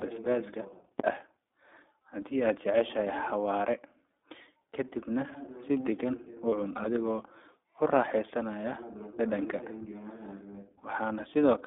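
Throughout, the speech carries the sound of the iLBC codec, a narrowband VoIP coder that rebuilds each frame's excitation independently of the previous one. Content is confined to roughly 250 Hz to 3.6 kHz, so the top end is gone and the low end is thin. The coding damage is plainly audible as a rough, slightly synthetic texture on the voice. The character fits the 15.2 kbps iLBC mode with 20 ms frames.

From 1.00 to 1.07 s there is a phantom power thump. A supply was switched on a live input, and the voltage step passed through the coupling capacitors as a low-frequency transient. It is heard as a deep, short thud. Its tail decays in about 16 ms, so it reads as a dull knock rather than a drawn-out boom.

From 6.50 to 6.53 s there are lost iLBC frames. The decoder had no data for this span, so it filled the hole by repeating the last pitch cycle blended with noise. The gap is heard as a brief held, faintly buzzy vowel-like tone. 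The length fits a single missing 20 ms frame. Because iLBC frames are coded independently, the voice snaps back to normal immediately after the concealed gap.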